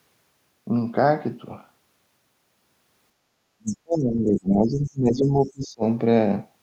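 Speech suppressed in double talk appears at 3.36 to 3.4 s and again from 3.57 to 5.84 s, likely because an echo canceller, facing both sides talking at once, attenuated everything. The talker's speech drops sharply, by roughly 30 dB at its deepest. Within that stretch, the other side's voice leaking through is heard at 3.67 to 3.76 s and 5.44 to 5.49 s. The loudspeaker echo was likely not fully removed, leaving brief scraps, the first about 20 dB below the speech and the second much fainter.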